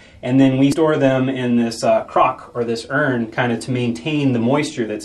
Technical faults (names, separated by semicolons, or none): damaged data in a compressed stream